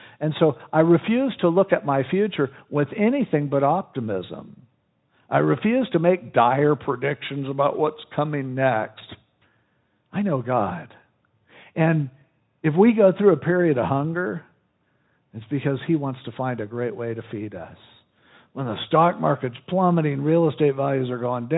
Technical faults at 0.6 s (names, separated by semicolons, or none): VoIP packet loss concealed by the speech codec